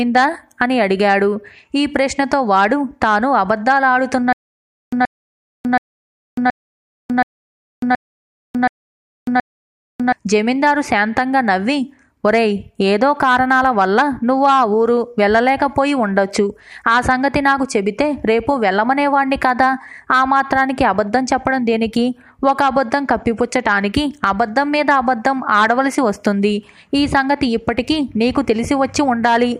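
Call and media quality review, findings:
Stutter with silent gaps, 4.33 to 10.13 s. The same 127 ms burst repeats 8 times, each followed by 598 ms of digital silence, on a 725 ms cycle. Likely a player or stream stall, replaying the last fragment on each retry. Audio for that span is lost.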